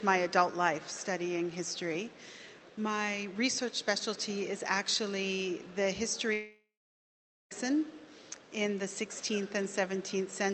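From 6.33 to 7.53 s the sound breaks off, likely from a long network dropout. A fading buzz briefly extends the last sound, followed by 0.82 s of near-silence. A spectrogram shows a smeared tail, then an empty gap, before audio resumes with 1.18 s lost.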